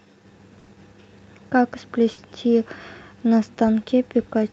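At 0.59–0.70 s and 2.12–2.20 s, bursts of packet loss stretch the last sound out and fade it (about 80 ms, then 60 ms), not silence, before skipping ahead.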